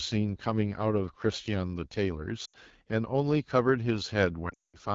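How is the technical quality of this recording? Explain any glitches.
The technical quality is poor: the speech sounds coarse from start to finish, with two brief dropouts near the middle and end.

AMR wideband (HD Voice) codec, throughout: the low-rate vocal tract model leaves speech rough and raspy, which points to a rate around 8.85 kbit/s.

Lost AMR speech frames, at 2.45 to 2.55 s and 4.49 to 4.77 s: the decoder repeats the last good settings with falling gain. The sound drops to near silence within two frames, even in the 200 ms run.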